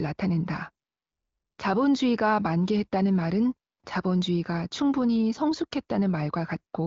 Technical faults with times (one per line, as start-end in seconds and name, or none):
none